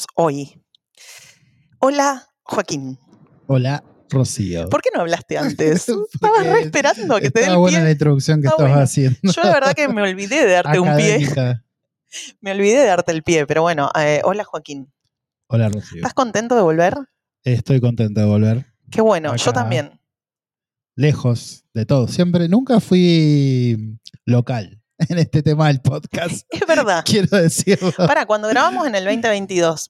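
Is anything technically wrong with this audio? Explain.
No, nothing technically wrong.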